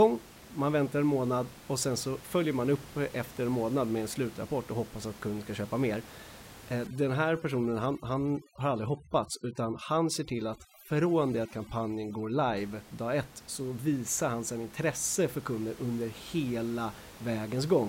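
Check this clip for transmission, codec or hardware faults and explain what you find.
One fault appears, between 6.87 and 12.57 s: overdone noise removal. A noise reducer set too hard mutes individual frequency bands that sit near its noise estimate, taking quiet speech detail with them. The steady room noise, about 20 dB below the speech, collapses into near silence with twinkling specks. Unlike low-bitrate codec warble, the damage tracks the noise floor and stops cleanly at 12.57 s.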